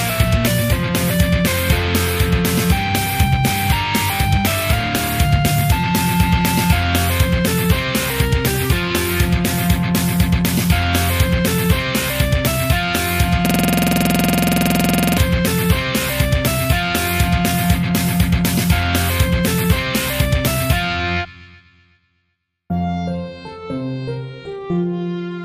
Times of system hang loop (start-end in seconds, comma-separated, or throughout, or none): 13.46-15.18